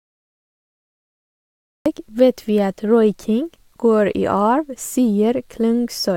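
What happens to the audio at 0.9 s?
At 0.9 s there is only digital silence, part of a cut-off start lasting until 1.86 s. Capture began late, so speech jumps in mid-sound with no attack: a flat waveform, then a hard vertical edge.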